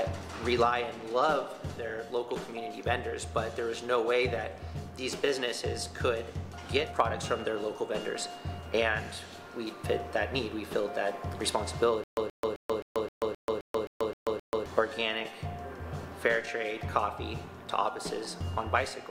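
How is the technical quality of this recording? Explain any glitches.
The recording has one glitch: a stutter with silent gaps from 12.04 to 14.66 s. A short burst of about 127 ms plays, then about 135 ms of silence follows. The pattern repeats ten times at a steady period of about 262 ms. This likely comes from a stalled player or stream. At each retry it replays its last fragment and then runs dry. The audio that belonged in this stretch is missing.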